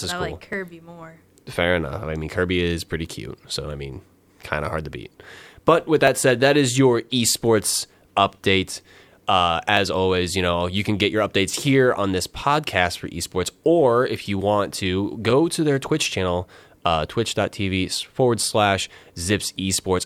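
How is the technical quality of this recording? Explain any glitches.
The recording carries one recurring glitch: a regular click through the speech.

Clock drift buffer slips run from 0.53 s, right after "I cool I like", to 18.99 s, with a click or tick about every 1.85 s, roughly ten in all. The likely cause is two devices on independent clocks disagreeing by a few hundred parts per million. The buffer between them gradually over- or under-fills until a few dozen samples are dropped or repeated, and each slip leaves a short discontinuity at a steady interval.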